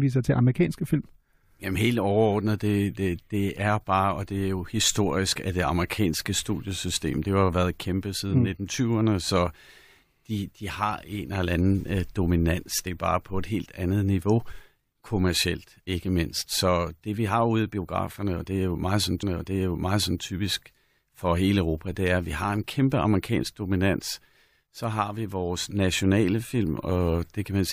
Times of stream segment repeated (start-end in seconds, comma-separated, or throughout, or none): 19.21-20.21